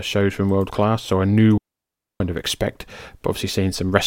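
At 1.58 s the speech cuts out for about 0.62 s, until 2.20 s: a digital wireless dropout. The receiver lost too much of the radio data stream and muted with an abrupt fade, leaving a clean near-silent hole with no noise burst on either side.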